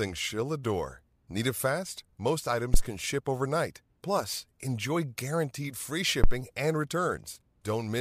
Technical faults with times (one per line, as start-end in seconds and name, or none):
2.74-2.84 phantom power thump
6.24-6.36 phantom power thump